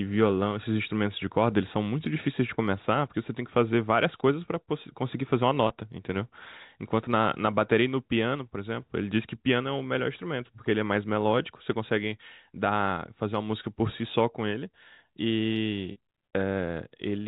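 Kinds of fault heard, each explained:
Packet loss with pitch repetition: speech data went missing twice, and the receiver filled each gap by repeating the last pitch period. This produced a brief held, buzzy tone for 20 ms at 5.68 s and for 40 ms from 15.92 to 15.96 s.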